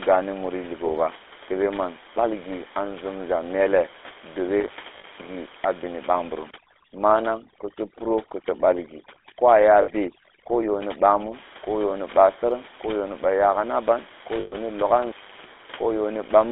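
The whole thing has that buzzy, gravelly GSM full-rate codec roughness, band-limited to roughly 300 Hz to 3.6 kHz, which fits the old 13 kbps GSM coder. From 4.60 to 5.28 s there's an intermittent contact: crackly edges, then roughly half a second of near-dead line where the plug opened, leaving faint hiss; elsewhere the room noise sits about 18 dB under the voice. Inside that stretch, at 4.98 to 5.05 s, lost GSM frames hold the last good sound as a short metallic ring for 60 ms, which fits about three dropped 20 ms frames. The same ringing smear comes back at 9.82 to 9.91 s, again 60 ms, and at 14.40 to 14.55 s, where it lasts 120 ms. Finally, from 15.01 to 15.54 s, the contact crackles open again for about a third of a second before the line comes back.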